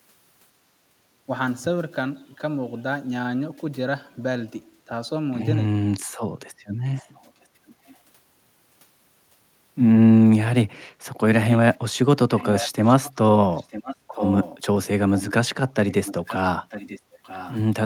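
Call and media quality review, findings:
Speech suppressed in double talk, 1.26 to 1.30 s: brief dip of roughly 10 dB lasting about 40 ms. Likely the echo canceller mistaking overlapping far-end audio for echo and attenuating the near talker along with it.

Echo leak at 6.96 to 7.96 s, 12.36 to 14.59 s, 15.15 to 15.33 s and 15.88 to 17.58 s: delayed copy trailing 944 ms behind, at about -35 dB in the first, about -15 dB in the middle two and about -20 dB in the last. Likely residual loudspeaker pickup passing the canceller.

Background gated by the echo canceller, 17.06 to 17.21 s: room tone drops about 9 dB for roughly 150 ms, then recovers. Canceller clamping the microphone while loudspeaker audio is playing, releasing once it stops.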